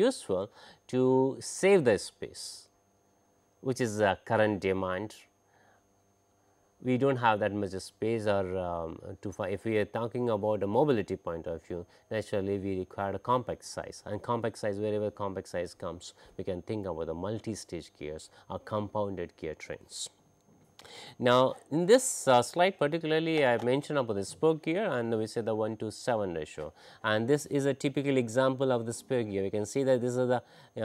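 From 9.4 to 13.59 s there is sample clock jitter. The converter's clock wavers by a couple of microseconds, so samples land slightly off time. Steep parts of the waveform suffer most. A faint hiss and roughness, roughly 45 dB below the sound, rides on loud and bright passages.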